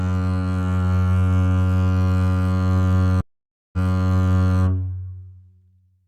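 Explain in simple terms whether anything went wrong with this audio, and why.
At 3.21 s the music cuts to silence for about half a second: a stream reconnect. The connection dropped, the player reconnected and restarted decoding, and by 4.61 s the music is playing again from 0.88 s earlier, so a short passage repeats.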